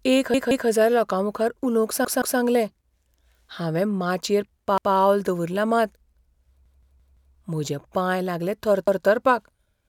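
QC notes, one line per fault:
0.34–0.68 s, 2.05–2.39 s (after "एक हजार लोकांमुखार उलोवंक"), 4.78–4.95 s (before "दवरलां मात"), 6.66–7.34 s, 8.88–9.05 s (after "पांय लागले"): repeated buffer. New audio arrived late, so the device replayed its last 171 ms block, consistent with an 8192-sample buffer, one to four extra times. The speech stutters, with a hard join at each repeat.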